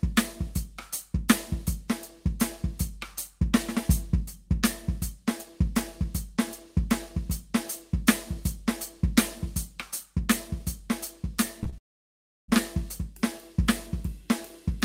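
Short concealed packet loss hits the music twice in quick succession, at 11.63 to 11.68 s and again at 11.70 to 11.74 s. Each time about 20 ms of audio failed to arrive in time, and the receiver bridged the gap by extending the preceding sound for roughly 23 and 25 ms before blending back into the real signal. The result is a pair of brief smeared wobbles, with a tiny portion of the music simply missing.

A long network dropout follows at 11.78 s and lasts until 12.5 s. The music cuts to a brief fading continuation of the last sound and then to near-silence for most of that stretch. When it resumes, roughly 0.7 s of the music is gone rather than delayed. This pattern is most likely caused by a stall in the incoming stream, with nothing arriving for the receiver to decode.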